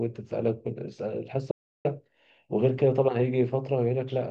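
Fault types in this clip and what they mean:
Audio dropout to silence: the speech cuts off abruptly at 1.51 s and returns mid-flow at 1.85 s, leaving a gap of about 340 ms of complete silence with no room tone or background underneath. The signal stops rather than fading, so whatever was spoken in that span is simply missing. The likely cause is a brief loss of the input, such as a dropped link or momentary mute, while recording continued writing silence.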